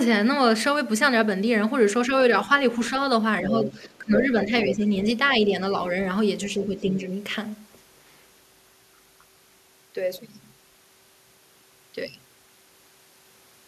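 From 3.42 to 4.88 s, speech is suppressed in double talk: the echo canceller, likely unable to tell the near talker from loudspeaker echo while both sides spoke, turned everything down. The talker dips by as much as roughly 15 dB, for well over half a second in total. Within that stretch, the other side's voice leaks through, likely echo the canceller left in the microphone signal. It sounds faint at 3.45 to 3.72 s, about 10 dB under the talker, then stronger from 4.14 to 4.82 s, only about 5 dB below. The same pattern recurs more mildly: a leak from 6.45 to 7.0 s, about 20 dB down, overlaps a shallow suppression dip of roughly 5 dB from 6.57 to 7.08 s.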